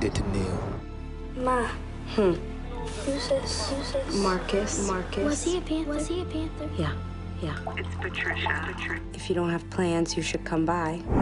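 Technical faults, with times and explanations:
3.37 to 8.99 s, doubled audio track: a second full-band copy trails about 0.7 s behind, roughly 5 dB quieter, dry and without decay, appearing and vanishing abruptly, likely from a slower second capture path. Spectrogram and waveform show every event repeated at that fixed offset.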